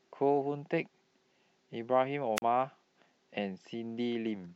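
At 2.36 to 2.42 s, a wireless microphone squelch dropout: the FM signal fades, hiss rises briefly, then the receiver mutes the speech for about 41 ms.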